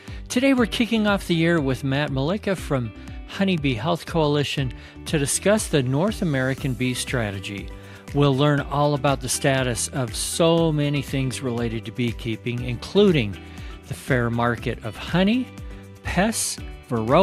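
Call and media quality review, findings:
DAB burbling, 13.88 to 14.07 s. Weak DAB reception lets residual bit errors, around 0.15 percent, slip past error correction into the MP2 audio data. Corrupted samples put noise blips in single sub-bands over roughly 190 ms, across nine MP2 frames. Heard as a short burst of burbling. Probable component: DAB receiver front end or channel decoding.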